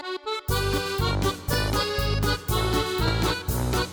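Sharp loud pops cut through at 1.53 s and 3.08 s, the first stronger, each likely a brief voltage spike from a switch or static.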